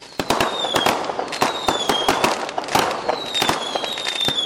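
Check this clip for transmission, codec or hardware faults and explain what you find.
One fault is audible: a loud pop from 2.62 to 2.64 s. It is a single sharp click that peaks a few dB above the surrounding sound. The sound carries on underneath it without a break. The likely cause is a brief voltage step or pulse entering the chain, from a plug, a switch, static or a driver glitch. The circuits that follow shape that pulse into the short, hard transient heard here.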